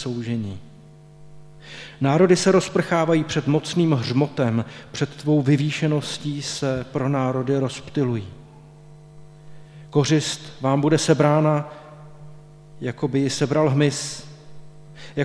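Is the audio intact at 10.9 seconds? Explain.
Yes, the audio is intact at 10.9 seconds, with no dropout, click, distortion or other fault audible at that moment.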